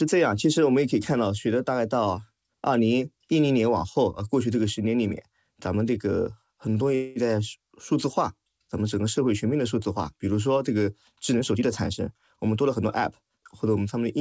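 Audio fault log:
6.95–7.27 s call audio freeze: the speech halts and the last sound is carried on as a fading buzz for roughly 0.2 s before the audio resumes where it stopped, so nothing is lost. The likely cause is delayed packets leaving the jitter buffer empty. On a spectrogram a smeared, decaying copy of the preceding spectrum bridges the gap, and the waveform shows a tapering sustained tone.
11.37–13.76 s jitter buffer speed-up: the speech runs about 9% fast at unchanged pitch and sounds hurried, as the receiver repeatedly cuts one or a few pitch periods to drain excess buffered audio, removing around 0.2 s in all. The waveform shows tightly spliced periods, and spectrogram harmonics keep their spacing while syllables compress.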